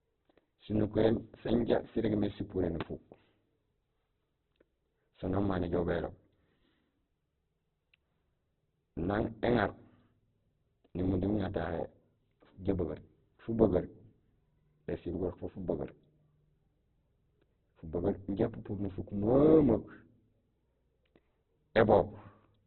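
Heavy Opus compression, likely at a very low rate around 8 kbps, runs short of bits in every band, leaving the speech grainy, rough and muffled, with nothing above 4.4 kHz. From 2.81 to 2.83 s, just after "sirégmé sipuré", a voltage pulse, likely from a plug, switch or static, adds a single loud pop about 15 dB above the speech.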